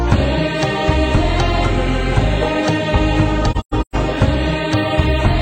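From 3.51 to 3.95 s there's AAC frame loss with muting. Several frames went missing, and the decoder zeroed their spectrum instead of guessing, so about 0.3 s of sound drops out, scattered across roughly 0.43 s. You hear a stuttering run of gaps, the longest around 150 ms. The overlapping transform windows fade each hole out and back in, so the edges are soft rather than chopped.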